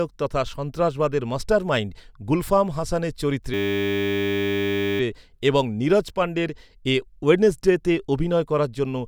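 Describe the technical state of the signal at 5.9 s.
At 5.9 s the speech signal is intact, with no audible dropout, distortion, clipping or other fault at that moment.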